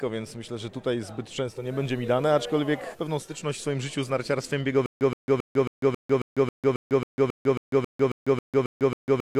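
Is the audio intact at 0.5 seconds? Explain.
Yes, at 0.5 seconds the audio is intact, with no dropout, click, distortion or other fault to be heard at that point.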